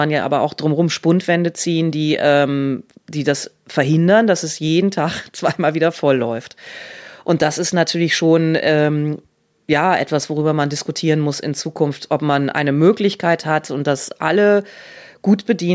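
Speech recording with no audible technical faults.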